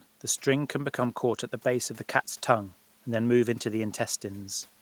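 No technical faults can be heard anywhere in this speech.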